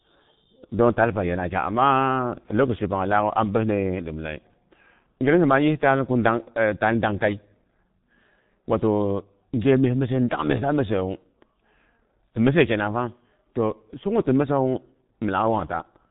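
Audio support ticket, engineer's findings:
G.723.1 codec damage, whole clip, heavy. Speech muffled and hoarse, nothing up top past 4 kHz, consonants smeared. Sounds like a low-rate path, fits around 6 kbit/s; 30 ms frames and a slow-updating voice model blur fast detail. Check the trunk transcoding.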